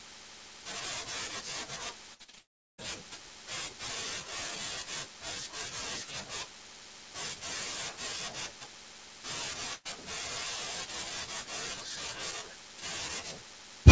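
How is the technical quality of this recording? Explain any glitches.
The recording has clear packet-loss damage at two points, and the band stops at 8 kHz, which fits a wideband call codec such as G.722 on a call path.

From 2.14 to 2.38 s there is repeated packet loss (robotic sound). Four separate gaps, the longest 56 ms, are each patched by extending the previous sound. About 59% of that span is synthesized, so the sound turns choppy with fragments missing.

From 2.38 to 2.84 s the audio cuts out, likely a long network dropout. About 400 ms never arrives. The receiver stretches the last sound into a short fading buzz or hiss, then leaves roughly 380 ms of silence before the signal returns with that section gone.

From 9.73 to 9.87 s there is a burst of packet loss. About 120 ms is lost, and the concealment briefly holds and fades the preceding sound before about 70 ms of silence. The audio then resumes past the missing part.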